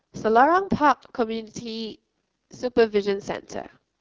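The speech sounds rough and raspy from start to finish, with a buzzy, gritty texture over every syllable and a thin, hissy top end that lacks real detail. This is heavy damage from the AMR wideband (HD Voice) codec run at its lowest rate, which fits about 6.6 kbit/s. The codec rebuilds speech below 6.4 kHz from a coarse pulse-driven vocal tract model and fills the band above with shaped noise.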